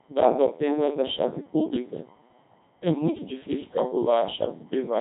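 Right through the clip the speech has gone through a Codec 2 vocoder, and it sounds like a roughly 2.4 kbit/s setting. The waveform is resynthesised from sine waves, so it's robotic and buzzy, with nothing above 3.8 kHz.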